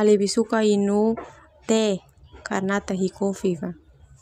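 No technical faults are audible.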